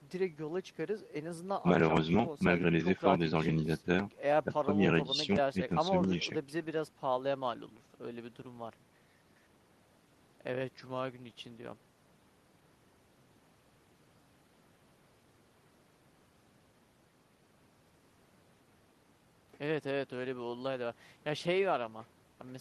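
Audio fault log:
No fault is heard anywhere in this speech clip. Nothing in it calls for a timed entry in the log.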